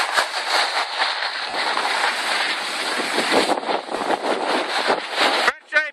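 Lost LE Audio frames at 1.50–1.54 s and 3.97–4.01 s: each 40 ms gap, consistent with four 10 ms frames, was concealed by the LC3 decoder replaying the last spectrum with random signs. Each gap is heard as a brief noisy smear.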